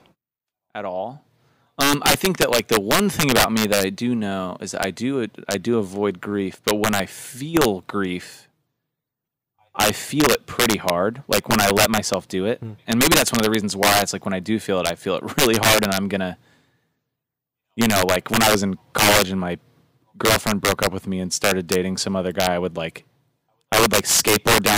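Loud moments in this speech recording break into violent, harsh cracks throughout, far sharper than ordinary clipping. This is integer overflow. The signal is driven about 11 dB too hot, and around one percent of samples wrap to the opposite sign instead of being limited.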